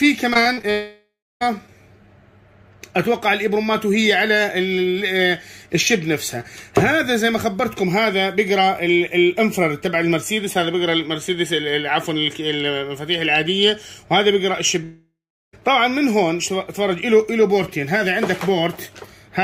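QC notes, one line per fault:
0.33 to 0.65 s, repeated packet loss (robotic sound): five short holes open in quick succession, the longest about 36 ms, with roughly 30% of this span patched by extending the preceding sound. Each repeat freezes the spectrum for a moment, so the audio turns choppy. On a spectrogram, horizontal streaks stop abruptly at vertical seams. The waveform shows repeated, copy-like cycles between the breaks.
0.71 to 1.43 s and 14.84 to 15.55 s, long network dropout: each time about 0.7 s of audio vanishes, and the likely cause is a network dropout. The last sound is stretched into a buzz or hiss that decays, followed by true silence of about 0.29 s in the first case and about 0.39 s in the second. The audio then resumes mid-stream. On a spectrogram, a blurred, fading band gives way to an empty gap, and the waveform flattens to a line before the sound returns.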